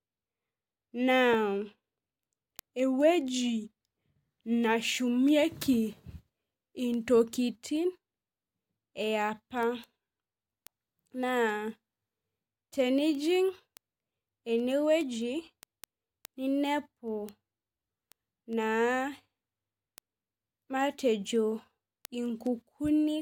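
A speech recording carrying word clock ticks from 0.11 s to 23.09 s: sharp ticks of uneven strength arriving about every fifth of a second, around a hundred in all. Each is a single dropped or repeated sample where the receiving device's free-running clock slips against the sender's, which points to a clock mismatch of roughly 100 ppm. Unlike buffer dropouts, there are no gaps, and the ticks keep their even spacing whatever the speech is doing.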